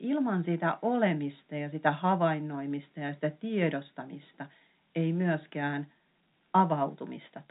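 Speech carried over G.711 telephone coding, with nothing above 3.8 kHz as expected for that path, and no faults present.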